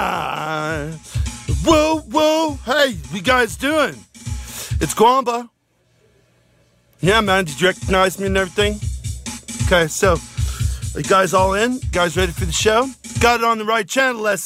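From 0.10 to 14.45 s, clock slip clicks make a soft rattle, ticking roughly every 30 ms. Two unsynced clocks, likely about 700 ppm apart, drop or repeat single samples.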